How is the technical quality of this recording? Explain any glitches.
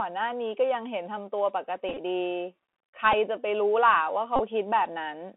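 The recording is narrowband and plainly degraded throughout, with three short glitches.

The Bluetooth CVSD headset codec shapes the whole clip. The speech sits in a telephone band of about 200 Hz to 3.4 kHz, so there is no air or brightness above that. The damage is plainly audible. CVSD codes each sample as a single up or down step whose size adapts. Fast, loud high sounds outrun the step. S sounds turn scratchy, and a grainy hiss sits under the speech. This fits the 64 kbps headset link.

The Bluetooth headset packet repeated fault occurs at 1.89 to 1.99 s, at 3.12 s, and at 4.36 to 4.40 s. Voice packets were lost on the headset link, and the chip decoded the previous packet's bits again. Each repeat recurs every 3.75 ms, which produces a buzz near 267 Hz. At 1.89 s, about 45 ms is lost across roughly 83 ms. At 4.36 s, about 34 ms is lost across 45 ms. The longest runs last around 20 ms, so these two spots buzz briefly. 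The 3.12 s event loses about 11 ms and buzzes only very briefly.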